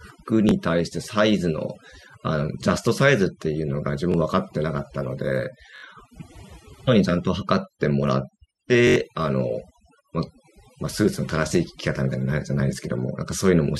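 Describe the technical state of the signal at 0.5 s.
At 0.5 s there is a repeated buffer, from 0.49 to 0.51 s. Fresh audio arrived late, so the last block played once more. The span fits a 1024-sample buffer, about 21 ms. That is too short to hear as a stutter, so it comes through as a click or brief buzz. Unlike a dropout, sound is repeated rather than silenced, and about 20 ms of new audio is skipped.

Overdone noise removal also runs through this moment, as it does across the whole clip. Bands near the estimated noise floor are pulled far down, leaving a lowered background that breaks up into twinkling specks. It differs from a low-bitrate codec because the damage follows the noise estimate rather than the bit budget.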